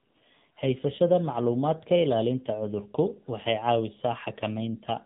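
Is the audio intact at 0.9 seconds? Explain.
No. At 0.9 s the speech is affected by the AMR narrowband mobile codec, which runs through the whole clip rather than at that moment alone. The codec rebuilds the voice from a vocal-tract model excited by a few pulses per short subframe, at a low bit rate that fits the 7.4 kbps AMR-NB mode. Nothing above about 3.8 kHz survives, so the voice sounds muffled and telephone-like, and its plainly audible coding damage gives it a buzzy, synthetic edge.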